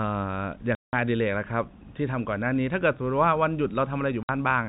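At 0.75 s the speech drops out completely until 0.93 s, a hard 180 ms hole, and at 4.23 s there's a shorter 60 ms gap ending at 4.29 s. That's packet loss filled with silence: the receiver had nothing to play, so it inserted silence. Both lengths fit runs of 30 ms packets, six and then two. The abrupt cut-ins sit over the band-limited telephone sound of the G.711 coding.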